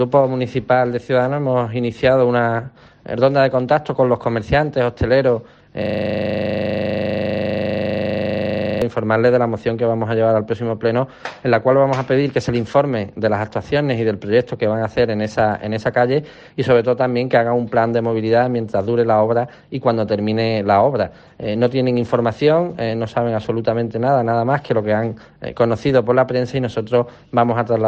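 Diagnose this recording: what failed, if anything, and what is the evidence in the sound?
From 5.82 s to 8.82 s the audio locks into a rapid, mechanical rattle: one 40 ms fragment repeats exactly, 75 times, at 25 repetitions per second. This is a system hang loop at the driver or buffer stage. The computer or its audio driver stopped delivering new samples while the sound hardware kept replaying the same ring buffer, which fits a buffer holding 40 ms of audio.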